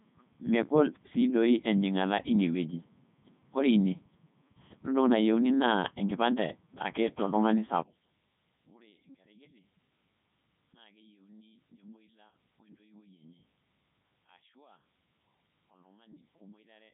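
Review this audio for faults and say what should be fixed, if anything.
Codec 2 vocoder damage runs the whole way through. The speech is rebuilt from pitch and envelope as sine waves, so it's robotic and buzzy, with nothing above 3.8 kHz, which fits the 3.2 kbit/s mode. To prevent it, capture or route the speech through a wideband codec instead of a low-bitrate vocoder.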